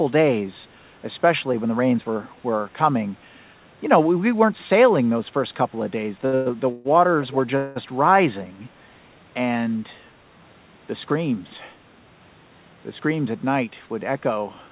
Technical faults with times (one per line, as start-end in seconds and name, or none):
6.26-6.35 short stall from a late packet
6.35-6.87 call audio freeze
7.57-7.78 call audio freeze